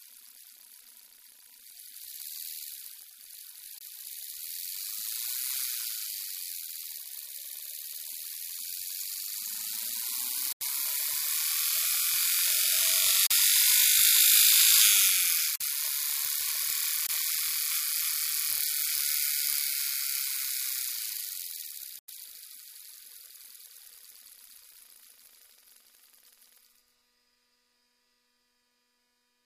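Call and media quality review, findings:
Block of digital silence at 3.79 s (23 ms), 10.53 s (86 ms), 13.27 s (39 ms), 15.56 s (47 ms), 17.07 s (23 ms), 21.99 s (93 ms). Hard cut to silence with no fade, unlike a concealed packet loss. Four of the lengths fit 1024-, 2048- and 4096-sample buffers, pointing to output buffer underruns in the playback path.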